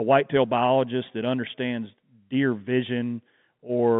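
Speech carried over a telephone line, its band running from 150 Hz to 3.6 kHz, which fits G.711 A-law coding, with no technical fault to report.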